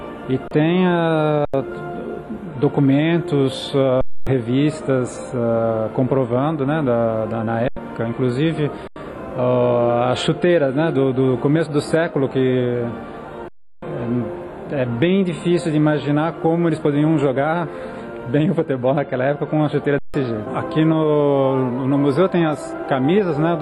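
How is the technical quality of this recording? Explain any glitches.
Seven dropouts mar the recording. Each is an underrun with held sample: the output buffer emptied and the converter froze on its last value, so the sound stops flat with little click. Some audio is lost during each gap. They occur at 0.48 s (34 ms), 1.45 s (85 ms), 4.01 s (256 ms), 7.68 s (85 ms), 8.88 s (85 ms), 13.48 s (341 ms) and 19.99 s (154 ms). The repeated 85 ms gaps fit a 4096-sample buffer.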